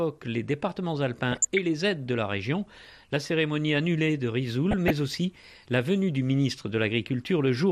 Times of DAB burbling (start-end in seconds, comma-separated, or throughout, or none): 1.32-1.58, 4.71-4.90